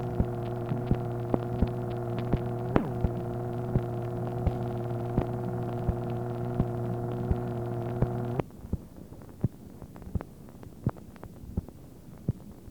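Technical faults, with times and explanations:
Nothing stood out on listening that would count as a technical fault.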